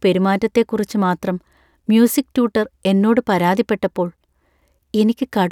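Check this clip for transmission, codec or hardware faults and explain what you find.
No faults detected.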